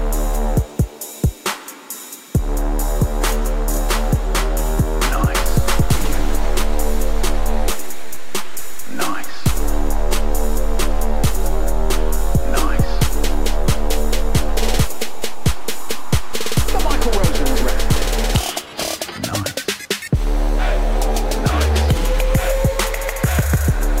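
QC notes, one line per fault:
5.43–18.05 s, DC step. The waveform's zero line jumps by about -16 dBFS at 5.43 s and holds there until it steps back at 18.05 s. Each sudden shift gives a low thump. The sound itself carries on unchanged on top of the offset.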